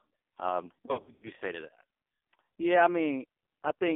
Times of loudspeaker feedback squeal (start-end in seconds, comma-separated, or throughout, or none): none